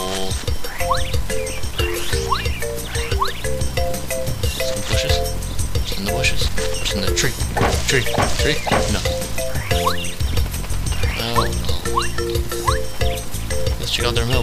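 No technical faults can be heard anywhere in the audio; the signal stays continuous throughout.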